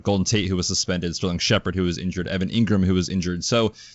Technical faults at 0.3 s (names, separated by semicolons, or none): none